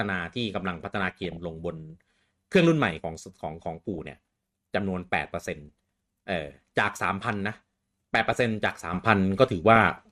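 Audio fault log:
Throughout, MP2 compression: The speech sounds dull and gurgly, with a grainy edge and upper frequencies that come and go. That's likely MPEG Layer II coding starved of bits, around 80 kbps by the sound of it, shutting off top sub-bands and coarsely quantising the rest.
0.59–1.37 s, 3.94–4.10 s, 5.61 s, 8.15–8.35 s, 9.76–9.91 s, DAB burbling: Bursts of burbling ride over the speech here. Bit errors, at a rate of roughly 0.3 to 0.5 percent, are slipping past error correction into the audio data, so corrupted samples put short noise blips in single sub-bands and corrupted scale factors make sub-bands jump in level for up to a frame.
8.93 s to end, sudden gain jump: The speech and its background noise step up together by about 7 dB in one go and stay there. It's likely a digital gain change applied instantly instead of ramped, so the level shift lands abruptly.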